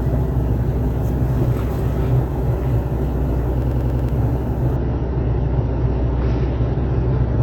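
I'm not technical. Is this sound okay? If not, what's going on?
No. There are two separate problems.

From 3.62 to 4.09 s there is a system hang loop. The computer briefly froze, but the sound hardware kept replaying its last small chunk of audio. That chunk is about 93 ms long, so you hear it repeat five times, a rapid stutter at roughly 11 times per second. About half a second of real sound is lost. A scratch or dropout sounds different: here the same fragment repeats exactly, with no silence between repeats.

From 4.76 s to the end there is adaptive stream at a lower bitrate. The connection slowed, so the player switched to a lower-quality version of the audio. The change happens at once and the sound keeps playing without a pause. Everything above about 6 kHz disappears, so the sound turns dull and fuzzy. A buffering problem would stop the sound, but here the sound continues at lower quality.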